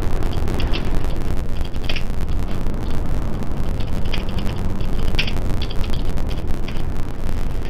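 Throughout the audio, interleaved audio read as planar gives a dull, robotic tone buzzing at about 92 Hz, matching 10.88 ms blocks split into half-speed left and right halves.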